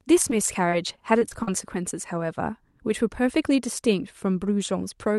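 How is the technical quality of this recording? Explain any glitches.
The recording has one glitch near the start. It travelled over a call path whose codec limits the top end to about 12 kHz, with coding texture that fits Opus at around 64 kbps.

Repeated packet loss (robotic sound) runs from 0.30 to 1.48 s. Seven gaps opened where packets went missing, about 140 ms in total, the longest gap 43 ms. Each gap was patched by extending the preceding sound, so the speech turns choppy, with short pieces dropped.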